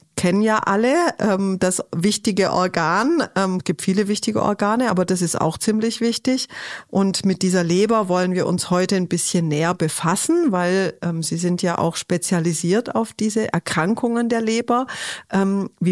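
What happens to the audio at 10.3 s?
Nothing goes wrong at 10.3 s; the audio plays through that moment intact.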